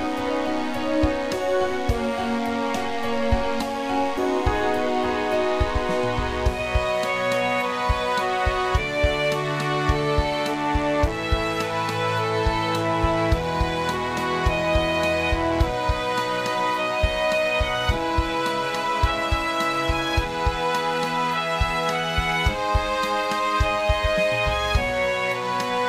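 A DECT cordless phone buzz runs through the whole clip: a thin, steady 100 Hz buzz rich in harmonics, sitting roughly 20 dB below the main sound. A nearby DECT handset or base station fires a radio burst every 10 ms, and the audio circuitry rectifies those bursts into audible pulses.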